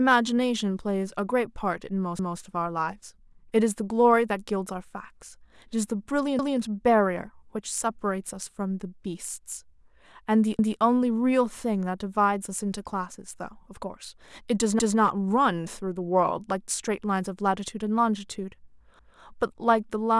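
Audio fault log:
2.19–2.39, 6.39–6.59, 10.59–10.79, 14.79–14.99 and 18.99–19.19 s, overlapping chunks: a brief stutter every 4.2 s as 200 ms of speech plays twice, because each 4-second chunk starts before the previous one has ended.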